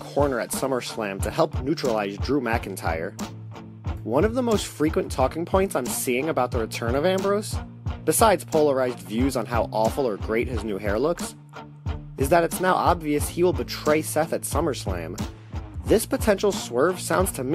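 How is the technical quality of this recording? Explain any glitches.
The technical quality of this recording is good, and there are no glitches to explain.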